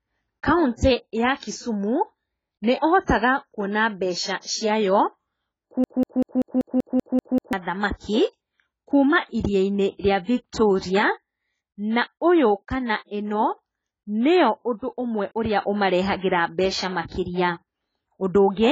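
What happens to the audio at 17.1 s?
A burst of pre-echo runs from 17.08 to 17.12 s: roughly 35 ms of short hiss arrives just ahead of a sharp attack in the speech. The transform codec spread quantisation noise across the whole block, so the quiet stretch before the onset is filled and the attack itself sounds softened.

Underneath this is heavy AAC compression, present across the whole clip, so the moment at 17.1 s carries it too. Nothing is reproduced above 7.7 kHz, leaving the speech dull and smeared with a fizzy edge on sibilants. The likely cause is AAC-LC at a very low bitrate, around 16 kbps.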